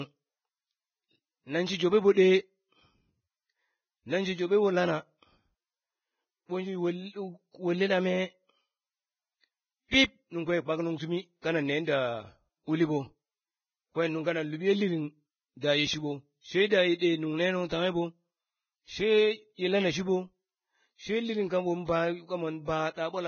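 Speech, heavily degraded by what is likely low-bitrate Vorbis compression, near 15 kbps: nothing above 6.5 kHz survives, and the remaining treble sounds hissy and grainy. Pre-echo from the codec's transform blocks smears quantisation noise ahead of sharp attacks, leaving brief hiss at 2.13 to 2.17 s (42 ms), 9.88 to 9.92 s (41 ms), and 16.98 to 17.01 s (27 ms).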